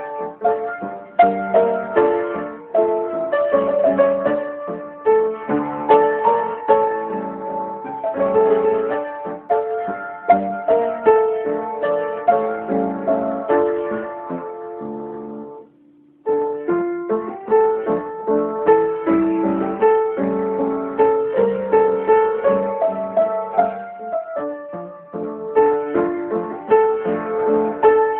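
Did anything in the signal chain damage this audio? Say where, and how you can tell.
No, the signal chain shows no audible damage at any stage.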